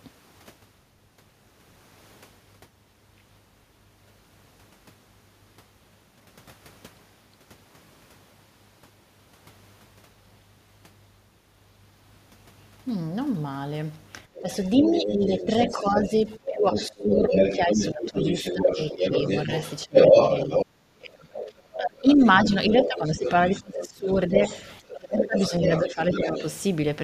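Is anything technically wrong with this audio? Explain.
Yes, there's a classic echo-canceller problem in the second half of the speech clip.

Other side's voice leaking through: from 14.34 to 20.65 s a second voice comes in at about the same level as the talker, then again briefly at 21.35 to 21.52 s (well below) and from 22.08 to 26.46 s (a little below). The likely cause is the loudspeaker playing the far end into the mic, and the canceller not stripping it all out.

Speech suppressed in double talk: the talker's own speech gets pushed down. It dips at 14.41 to 14.48 s (around 10 dB), 14.79 to 19.12 s (around 15 dB), 19.85 to 20.16 s (around 25 dB), 20.59 to 24.42 s (around 30 dB) and 24.79 to 26.42 s (around 20 dB). Likely both sides were talking at once and the canceller couldn't tell them apart, so it turned everything down.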